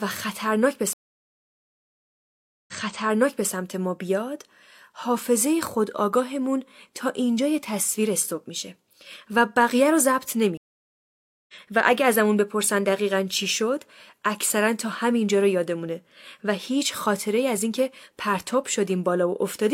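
At 0.93 s the speech cuts to silence for about 1.75 s. This is a stream reconnect: the connection dropped and a new decoder picked up mid-stream. Playback returns at 3.52 s, about 0.84 s earlier than where it broke off, because the server resent a burst. The waveform shows a flat gap, then a soft fade-in.

At 10.57 s a second reconnect leaves about 0.91 s of silence, a blank column on the spectrogram. The speech resumes at 11.54 s roughly 0.7 s further on, so a short stretch of speech is skipped.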